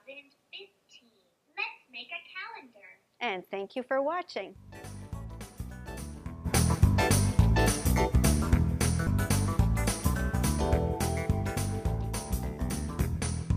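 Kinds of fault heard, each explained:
Damaged data in a compressed stream: at 9.06 s, corrupted bytes make the decoder misread a frame and lose sync, giving a brief blip.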